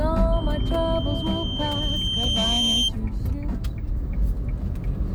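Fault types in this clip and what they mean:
Loudspeaker feedback squeal: a microphone-to-loudspeaker loop with gain above unity at one frequency, so that component reinforces itself. Here a 3.1 kHz tone rises from 0.32 s, swells over about two seconds to roughly 5 dB above the sound, and stops at 2.92 s.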